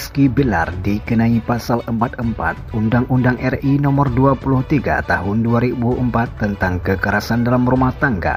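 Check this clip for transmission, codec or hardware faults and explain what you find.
Checking this clip turns up no faults to explain.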